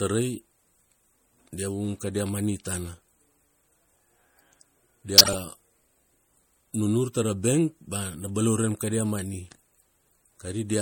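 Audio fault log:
Throughout: MP3 compression. The speech sounds watery and swirly, with the top end cut off and a metallic chirp riding on s sounds, while consonant attacks blur. This is likely lossy coding at a bitrate around 64 kbps. That gives the encoder too few bits, so it trims the treble at a fixed frequency and zeroes weaker frequency lines, which flicker on and off from frame to frame.
5.18–5.35 s: corrupt frame decoded. For about 0.18 s there is a burst of misplaced energy, peaking at about -5 dBFS. Damaged bits in a short run of compressed frames, roughly seven, were decoded regardless. Misread gains and codes scattered energy into the wrong frequencies for the length of those frames, which produces the garbled burst.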